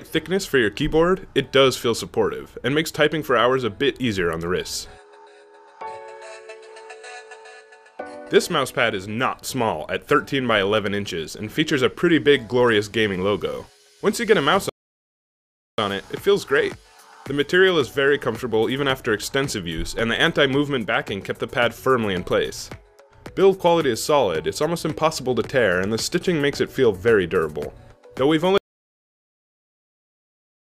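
A rebuffering stall at 14.69 s halts playback for 1.09 s until 15.78 s, then the audio resumes exactly where it stopped, adding time but losing nothing. An audio dropout to silence starts at 28.58 s and runs to the end, leaving digital silence with no room tone, likely from the input being lost while recording continued.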